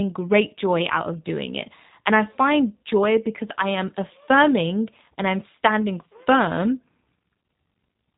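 Throughout the speech, the signal has passed through a G.729 codec, rebuilt from a vocal tract filter, pitch predictor and a few pulses per frame at a rate that fits 8 kbit/s. Nothing survives above 3.8 kHz, and the voice sounds plainly rough and synthetic.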